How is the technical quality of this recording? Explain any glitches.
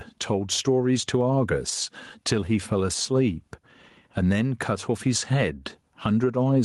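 The recording is compromised by gain pumping throughout. Input gain was likely set far too high, so a fast limiter clamps down on every loud syllable, making the level swell in pauses and duck by around 10 dB under speech, leaving everything squashed.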